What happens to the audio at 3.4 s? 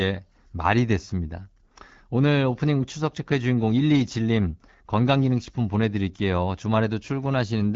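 Nothing goes wrong at 3.4 s: the speech carries on intact through that moment, with the AMR wideband (HD Voice) codec at 12.65 kbit/s leaving only light coding damage there.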